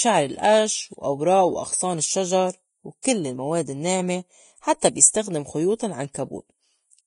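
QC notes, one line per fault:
Throughout: Vorbis compression, likely at a low bitrate around 29 kbps; the speech sounds hissy and grainy, with nothing above 10.6 kHz and coarse, noisy treble.
3.03 s: pre-echo, right after "القش وأوراق وأغصان الشّجر"; a brief hiss of about 19 ms smears in ahead of the attack, as block-wide quantisation noise leaks before it.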